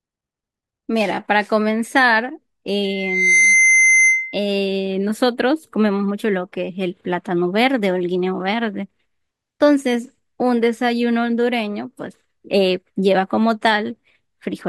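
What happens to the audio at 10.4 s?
Nothing goes wrong at 10.4 s: the speech runs on intact through that moment, with no dropout, click, distortion or other audible fault.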